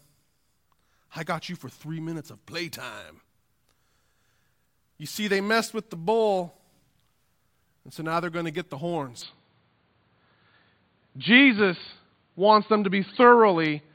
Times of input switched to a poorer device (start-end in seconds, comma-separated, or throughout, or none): 9.22-13.95